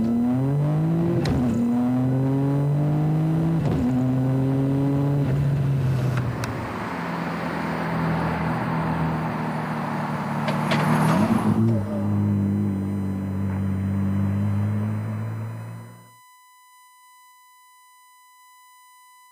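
A steady USB whine runs through the whole clip. It is a fixed tone at 1 kHz, and that is also its strongest component. Its level sits roughly 30 dB below the audio. The pitch fits the 1 ms frame timing of a USB bus. The current drawn by each frame leaks into the audio path through the power supply or ground. The result is a thin, constant whistle behind the sound.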